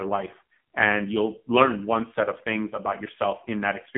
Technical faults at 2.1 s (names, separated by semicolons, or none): AMR narrowband mobile codec